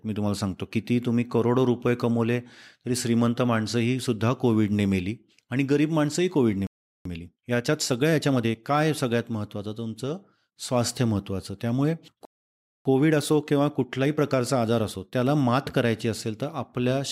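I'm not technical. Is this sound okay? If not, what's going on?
No. There is a playback stall at 6.67 s and again at 12.25 s: the speech simply stops, for about 0.39 s the first time and 0.6 s the second, then carries on. The likely cause is the player running short of incoming data or being briefly held up.

Time-compressed catch-up follows each gap, from 7.05 to 8.59 s at 1.25 times normal speed and from 12.85 to 15.85 s at 1.1 times. The player trims and blends tiny slices of audio to catch up, so the speech sounds hurried at normal pitch.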